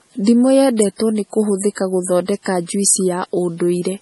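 From start to end, the speech has nothing above 11.5 kHz. This is low-bitrate audio saved at a high bitrate. It sounds like a very low-bitrate MP3, likely around 32 kbit/s, re-encoded at something near 256 kbit/s. The bigger file cannot bring back the lost top end or undo the first encoding's damage.

At 0.82 s there is a sharp snap laid over the speech. This is an electrical switching spike. It was likely caused by a nearby switch or discharge arcing briefly, with the audio line picking up the burst. It lasts only a few milliseconds.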